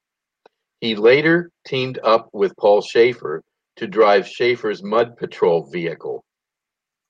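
At 2.17 s, just after "later teamed", one packet was lost and rebuilt from error correction: the next packet's low-bitrate copy filled the 20 ms gap. It sounds briefly rough and noisier, with no dropout; a spectrogram shows a grainier, smeared slice but no silent gap in the waveform.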